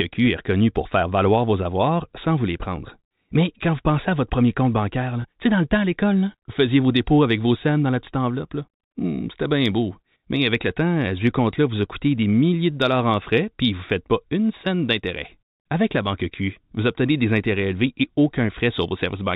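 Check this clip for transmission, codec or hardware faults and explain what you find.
One transmission fault shows up in this speech clip, a brief packet loss with pitch repetition between 5.22 and 5.24 s, right after "votre premier compte bancaire" and before "tu sais dans le". About 20 ms of audio is missing, which points to a single lost 20 ms packet. The receiver covered the gap by repeating the last pitch period, so instead of a dropout there is a momentary held, slightly buzzy sustain before the speech resumes. The G.711 telephone band limit below 4 kHz is audible throughout.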